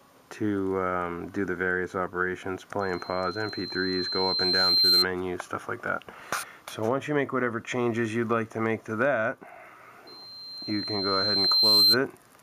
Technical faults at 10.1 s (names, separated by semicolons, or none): loudspeaker feedback squeal